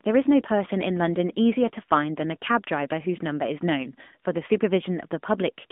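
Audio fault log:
Throughout, AMR narrowband mobile codec: speech confined to 200 Hz to 3.5 kHz, nothing above 3.7 kHz; vocal-tract modelling at a mid rate, fitting roughly 10 kbps, leaves a plainly audible buzzy, synthetic edge.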